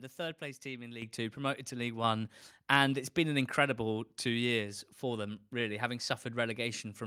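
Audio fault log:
1.02 s and 2.04 s, microphone volume stepped up: just after "third place team in", the speech and the background jump together by about 8 dB, then by about 4 dB more a second later, as the call software judged the input too quiet and raised the microphone gain in single steps.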